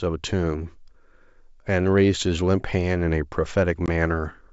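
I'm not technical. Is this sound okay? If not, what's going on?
No. Packet loss on an ADPCM call: one short chunk of audio went missing at 3.86 to 3.90 s, leaving a brief gap, and the decoder was thrown off, so the speech comes back slightly distorted for a moment.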